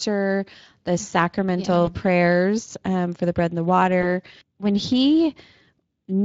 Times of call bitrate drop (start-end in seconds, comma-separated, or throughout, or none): none